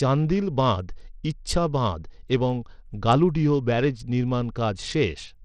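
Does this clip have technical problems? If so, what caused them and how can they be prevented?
Yes. Throughout the speech, the treble flickers and a gritty grain rides on the sound, likely Bluetooth SBC compression starving its top sub-bands at a bitrate that fits about 80 kbps. A spectrogram shows ragged, gapped high bands. Use a wired connection or a higher-bitrate Bluetooth codec setting to prevent it.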